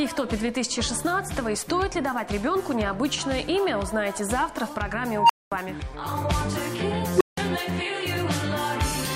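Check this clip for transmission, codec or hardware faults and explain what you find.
There's an unstable filter in here, and it blows up twice. At 5.12 s a tone around 1 kHz swells over 172 ms, clips, then drops into 221 ms of silence until 5.52 s. At 7.16 s it happens again, faster: a tone around 400 Hz builds in 47 ms, clips, then 168 ms of silence until 7.37 s. A recursive filter with bad coefficients keeps feeding its own output back until the numbers overflow, so you hear a squeal that goes very loud and then a dropout while it resets.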